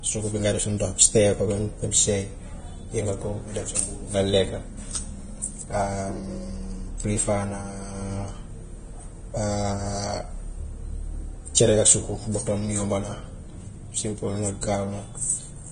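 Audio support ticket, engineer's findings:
Throughout: encoder likely running Vorbis at a low bitrate, consistent with roughly 24 kbps. Heavy codec damage: treble quantised so coarsely that fine detail turns to hiss of similar energy. Nothing above 9.7 kHz. Speech sounds grainy and dull, tones roughened, consonant attacks blurred.

14.61 s: pre-echo at a sharp onset. Transform block spreads its quantisation noise evenly, so noise sized for the loud attack fills the quiet gap before it. Short hiss, about 19 ms, leads the attack, which sounds smeared and soft.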